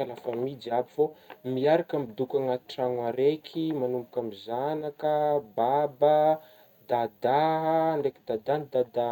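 No technical faults can be heard anywhere in the speech.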